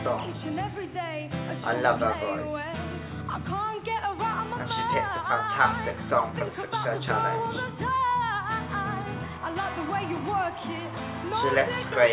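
No technical faults are audible.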